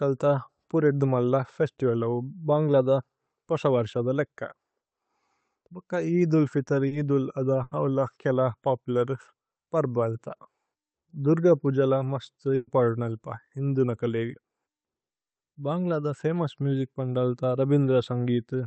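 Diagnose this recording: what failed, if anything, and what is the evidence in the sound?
The network dropped audio in a short concealed packet loss at 6.87 to 6.94 s. The receiver filled about 40 ms by extending the preceding sound and then blended back. Unlike the bursts, it is heard only as a brief smear or wobble, with no held tone or fade.

Two bursts of packet loss, also on the network side, occur at 7.63 to 7.74 s (80 ms concealed) and 12.55 to 12.70 s (120 ms concealed, ending in about 10 ms of silence). Concealment stretched the last sound into a held buzz or fading hiss, and the lost audio never returns. That longer gap separates these from the brief smear at 6.87 s.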